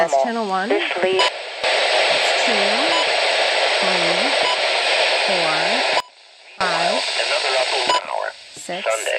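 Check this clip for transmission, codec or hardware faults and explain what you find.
There's a sudden gain jump twice: the level drops about 12 dB from 1.28 to 1.64 s, then about 24 dB from 6.00 to 6.61 s, likely from gain being switched without a ramp.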